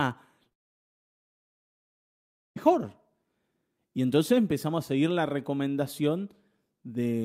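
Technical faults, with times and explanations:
0.43–0.47 s and 0.49–0.53 s, short concealed packet loss: about 20 ms of audio is missing each time. The gap is bridged with roughly 16 ms continued from the preceding sound and blended back, producing two quick smears. A spectrogram shows brief blurred patches.
0.53–2.58 s, long network dropout: right after the second smear the sound cuts out for about two seconds of near silence, then resumes without the missing stretch. The likely cause is that no audio arrived for that span. A spectrogram shows an empty band, and the waveform lies flat.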